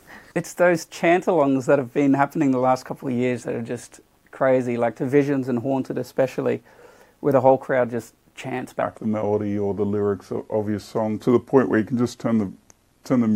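From 8.82 s to the end, the sound suddenly drags and drops about three semitones lower, playing at 0.838 times its proper rate. This section at the wrong speed was likely caused by playback or editing against a mismatched clock, shifting tempo and pitch together.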